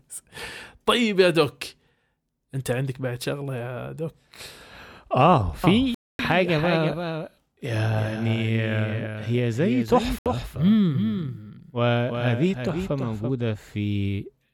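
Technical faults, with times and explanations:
5.64–13.30 s, doubled audio track: a full-band copy of the speech trails roughly 300 ms behind, a few dB quieter, starting and stopping abruptly, likely from a second, slower capture path; the spectrogram shows every pattern repeated, shifted right.
5.94–6.19 s and 10.19–10.26 s, Bluetooth dropout: abrupt silences of 0.25 s and 0.07 s, after which the speech resumes as if it had played on, likely from packets arriving too late; the waveform shows flat gaps and the spectrogram shows blank vertical bands.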